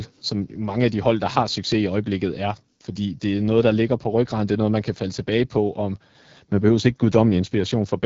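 From start to finish the speech carries the sound of the AMR wideband (HD Voice) codec at a low rate, which fits its 8.85 kbit/s mode. A pulse-driven vocal tract model rebuilds the voice up to 6.4 kHz, and too few bits leave it rough and raspy. Above that, the band is shaped noise, with nothing past 7.5 kHz. The grainy buzz and the hissy top band set it apart from a plain low-pass filter or narrowband telephone audio.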